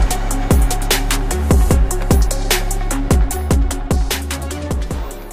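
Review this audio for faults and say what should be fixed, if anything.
Clock slip clicks run from 0.34 s to 5.21 s: faint ticks around twenty times, about every fifth of a second, each a single-sample jump. The likely cause is two devices on unsynchronised clocks drifting apart by something on the order of 100 ppm, so one sample is dropped or repeated each time the gap reaches a full sample. Unlike buffer dropouts, there are no audible gaps, and the ticks keep a steady rhythm instead of following loud peaks as clipping would. To fix this, lock all devices to one word clock or add proper sample-rate conversion between them.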